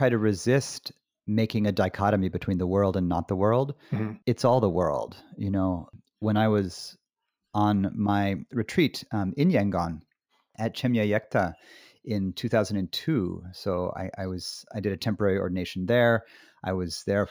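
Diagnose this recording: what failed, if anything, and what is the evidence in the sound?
Sample-rate conversion failed: the speech shows imaging from linear upsampling throughout. The rate was raised from 16 kHz to 44.1 kHz by straight-line interpolation between samples, a weak filter. It dulls the top of the original band and leaves a faint mirrored copy of the 0 to 8 kHz spectrum in the 8 to 16 kHz region, roughly 35 dB down. This gives sibilants a light metallic shimmer. Unlike aliasing, which folds content downward into the band, this residue sits entirely above 8 kHz as a reflection of what lies below.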